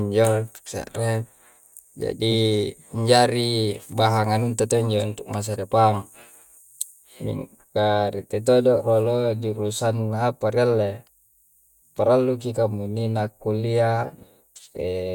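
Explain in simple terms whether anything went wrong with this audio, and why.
Nothing went wrong: the speech recording shows no technical faults anywhere in the signal.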